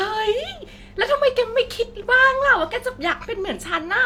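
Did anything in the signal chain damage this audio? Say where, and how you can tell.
No, nothing along the chain has left an audible mark on this speech recording, and the signal holds steady and continuous throughout.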